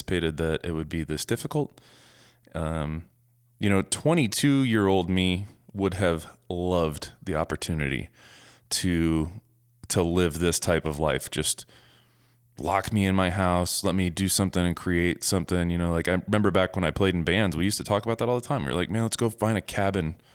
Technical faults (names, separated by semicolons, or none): none